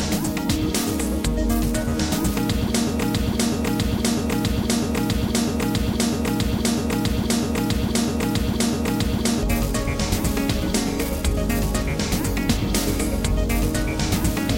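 From 3.01 s to 9.43 s a broken-record loop repeats a 0.65 s fragment exactly, ten times back to back, likely from a stalled player or stream resending its last buffer, so the intended audio is lost. Waveform and spectrogram show identical blocks tiling every 0.65 s.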